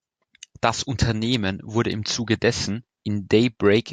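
Nothing here needs flagging; the speech runs its whole course without any technical fault turning up along the way.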